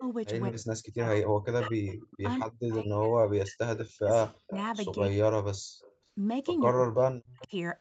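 Speech that keeps sinking and breaking apart: for much of 0.0 to 5.64 s, and again from 6.71 to 7.52 s, the voice dips by as much as roughly 40 dB or drops out in pieces. This is likely speech suppressed in double talk, where the echo canceller turns down the near talker along with the far side. A delayed second copy of the voice follows the speech by 197 ms at 1.62 to 2.75 s, 3.76 to 4.56 s, 5.82 to 5.93 s and 7.4 to 7.48 s. It sits roughly 10 to 30 dB below the direct sound, and is likely echo leak, where loudspeaker sound the canceller missed is sent back down the line. Right after that, from 5.93 to 6.05 s, the room background briefly ducks by about 11 dB for around a tenth of a second. That is background gated by the echo canceller, which clamps the microphone down while the loudspeaker is active.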